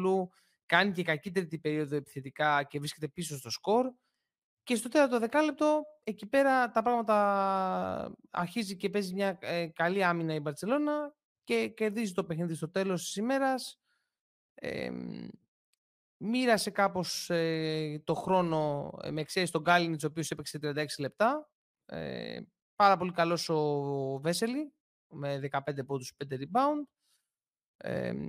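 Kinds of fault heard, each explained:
No technical fault can be heard anywhere in this speech recording; the signal stays continuous and steady throughout.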